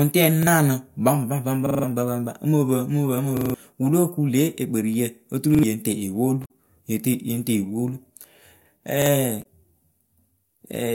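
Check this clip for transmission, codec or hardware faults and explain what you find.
Two kinds of fault appear in this speech: five repeated-buffer stutters and two bursts of damaged data in the compressed stream.

Repeated buffer, at 0.43–0.47 s, 1.66–1.84 s, 3.37–3.54 s, 5.55–5.63 s and 9.02–9.06 s: fresh audio failed to reach the output in time, so the device replayed its last block. Each block lasts about 43 ms, which fits a 2048-sample buffer. It repeats once at 0.43 s and 9.02 s, twice at 5.55 s and four times at 1.66 s and 3.37 s. The result is a hard-edged stutter, with roughly 40 ms to 150 ms of speech skipped each time.

Damaged data in a compressed stream, at 6.42–6.50 s and 9.39–9.45 s: corrupted bytes in the encoded stream left the decoder unable to read those frames. It lost sync and had to hunt for the next valid frame header. Each event is a short, unnatural chirp or blip lasting under a tenth of a second.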